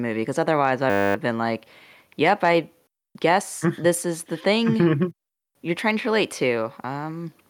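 From 0.9 to 1.15 s, after "movie because otherwise I", a system hang loop repeats one 10 ms buffer as a steady 100 Hz buzz, resuming at "been like yep I". It shows as identical repeating waveform cycles and evenly spaced harmonics on a spectrogram.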